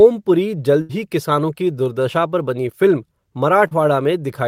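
At 0.81 s, just before "ही किसानों की दुर्दशा", there is a burst of packet loss lasting until 0.91 s. About 80 ms of speech failed to arrive in time, and the receiver covered roughly 77 ms of that gap by extending the last sound it had while fading it down. The result is a brief held, dimming tail, followed by an abrupt resumption with the intervening speech gone.

At 3.67 s a short concealed packet loss occurs, ending at 3.73 s. Around 40 ms of audio went missing, and the decoder synthesised about 39 ms to bridge it by carrying forward the preceding sound and blending back into the real signal. The patch is heard as a quick smear in the speech, with the original material in that slot lost rather than merely delayed.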